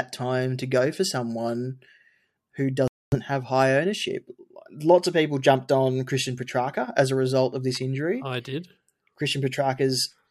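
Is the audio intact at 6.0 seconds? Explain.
Yes, at 6.0 seconds the speech plays through intact, with no dropout, click, distortion or other fault to be heard.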